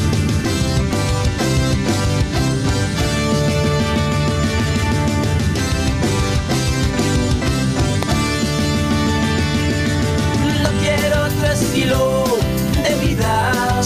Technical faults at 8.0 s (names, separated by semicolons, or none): loud pop